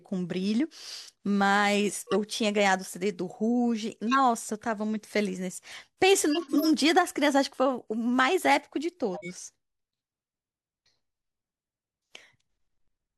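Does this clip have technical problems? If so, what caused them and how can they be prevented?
Yes. The speech carries four bursts of corrupt frame decoding: 1.89–2.15 s, 4.08–4.20 s, 6.30–6.68 s and 9.14–9.31 s. Each spans a handful of damaged frames, from about three up to around seven. Flipped bits made the decoder misread gains and codes, so energy lands at wrong frequencies as chirps and noise bursts. These peak near −10 dBFS at 4.1 and 6.3 s and are quieter elsewhere. Prevention: protect the bitstream with checksums and have the decoder conceal, not play, frames that fail.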